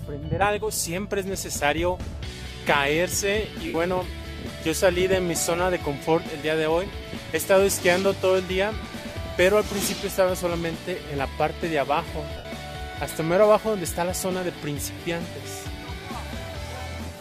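Lost LE Audio frames at 3.67 s and 12.37 s, lasting about 67.5 ms and 75 ms, which fits runs of 7.5 ms frames. The LC3 decoder refilled each gap by repeating the last spectrum with scrambled signs and fading it, so the sound briefly dissolves into a noisy smear.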